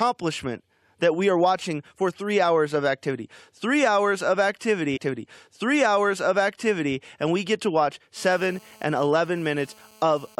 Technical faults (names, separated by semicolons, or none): stream segment repeated; GSM phone buzz